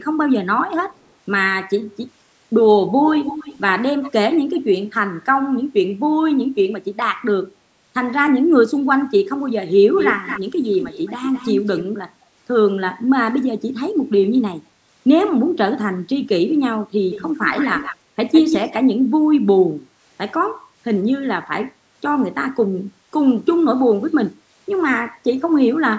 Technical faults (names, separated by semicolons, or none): echo leak